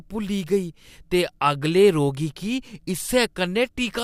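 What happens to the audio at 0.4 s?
Nothing goes wrong at 0.4 s; the speech plays through that moment intact, with no dropout, click or distortion.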